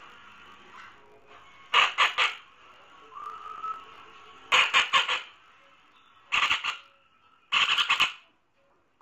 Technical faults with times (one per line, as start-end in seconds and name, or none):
0.00-9.01 interleaved audio read as planar